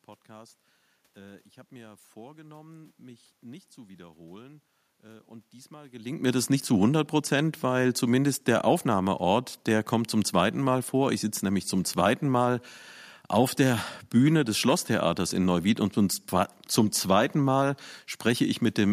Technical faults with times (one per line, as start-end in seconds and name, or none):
none